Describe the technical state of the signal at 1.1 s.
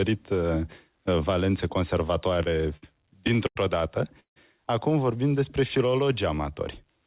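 At 1.1 s the audio is intact, with no fault at that moment, only the narrow telephone-band sound of the G.711 call path, which leaves nothing above 4 kHz.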